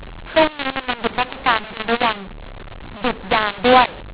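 A mu-law and A-law mix-up runs through this telephone speech from start to finish: the sound points to G.711 A-law coding at 8 kHz being decoded with the mu-law curve instead. Because the two logarithmic tables don't match, every sample is mapped to the wrong level, some too loud and others too quiet, so the speech turns harsh and gritty, and the quietest moments are pushed up into an audible noise floor that fills the pauses.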